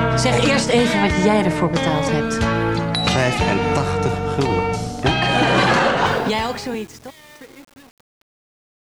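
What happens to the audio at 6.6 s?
At 6.6 s the audio sits inside a stretch of truncation distortion on a fade, running from 6.06 s to the end at 8.92 s. The fade-out stage keeps too few bits and adds no dither, which fits roughly a 7-bit word length, so the falling waveform snaps to coarse steps instead of shrinking smoothly. From about 6.12 s on, the fading sound turns gritty and grainy as it nears silence.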